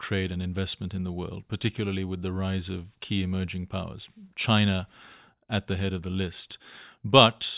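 No faults are audible anywhere in the speech.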